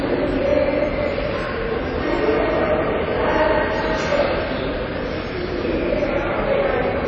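Everyday sounds run through the whole clip with plainly audible damage that is likely from WMA compression at a low bitrate, around 32 kbps: transients ring and smear, and a washy hiss breathes with the signal. A spectrogram shows nothing above 8 kHz, with gaps where weak components were discarded.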